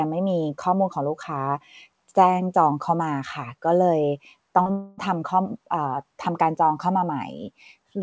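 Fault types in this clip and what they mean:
Short concealed packet loss: Around 4.62 to 4.68 s, roughly 40 ms of the call's packets arrived too late to decode. The receiver bridged the gap by extending the preceding sound and blending back, so the audio briefly smears and wobbles there.
Long network dropout: From 4.72 to 5.00 s, about 260 ms of audio was replaced by a synthetic continuation of the last sound that fades without ever reaching silence. The likely cause is packets that stopped arriving, and the audio resumes afterwards without the lost stretch.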